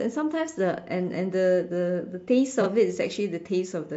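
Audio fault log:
2.61–2.67 s, frames out of order: two neighbouring 23.2 ms blocks play swapped, giving a brief garbled flutter; unlike a dropout, no time is lost.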